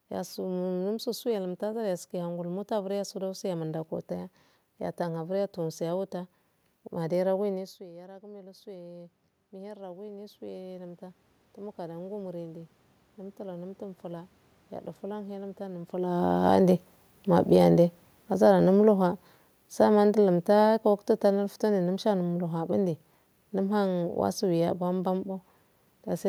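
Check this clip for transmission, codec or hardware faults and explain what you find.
Two automatic gain control faults show up, both responses to the talker's distance changing at the microphone.

From 7.54 to 15.98 s there is automatic gain rising. Around 7.5 s the talker moves back and the level drops by about 16 dB. The gain control compensates slowly, adding about 14 dB over roughly 8 s, so the voice and the room noise swell together.

From 16.11 to 24.73 s there is automatic gain falling. Around 16 s the talker comes closer, so the sound is loud at first while the gain is still high. The control then pulls back about 8 dB, and the voice and background sink together.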